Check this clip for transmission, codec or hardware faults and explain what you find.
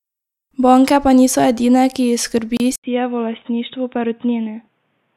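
Two faults are audible in this speech.

A gap at a join of encoded pieces falls at 2.57 to 2.60 s, right after "ki jih". The speech stops dead for about 30 ms, then resumes from where it stopped. The codec smears the edges of the gap. Each piece was encoded on its own. The encoder's leading delay and its padded final frame were never trimmed, so that silence sits inside continuous speech.

From 2.76 s to the end, the input was switched to a poorer device, likely a second microphone or a headset's call mode. An 80 ms silence marks the switch. Afterwards nothing is heard above 3.8 kHz, so the speech turns dull and boxy. The level drops by about 5 dB. A new background noise appears, about 45 dB below the speech. The narrower band, the change in level and the new noise all come from the different device.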